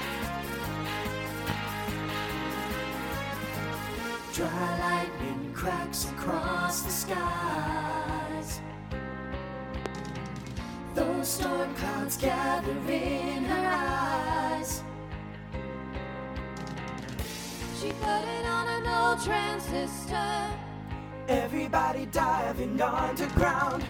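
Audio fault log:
1.50–1.53 s, 9.86–9.89 s, 17.91–18.07 s and 23.37–23.45 s: loud pop, single at the first two, a quick double at the last two, peaking about 15 to 20 dB above the sound. The sound carries on beneath each pop rather than cutting out, which sets this apart from a dropout. The likely cause is a voltage pulse from a plug, switch, static or a driver glitch.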